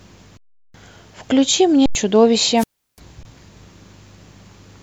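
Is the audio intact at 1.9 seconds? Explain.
No. An underrun with held sample flattens the speech from 1.86 to 1.95 s, with the converter holding its last value. Unlike a dropout to zero, it stops with little or no click, and about a tenth of a second was lost.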